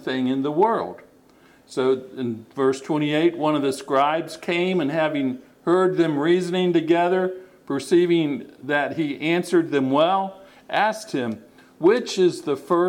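There are no technical faults to describe in this audio.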